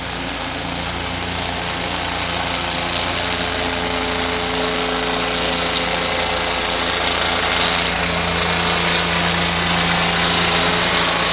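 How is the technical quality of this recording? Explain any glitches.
No technical problems can be heard in this recording.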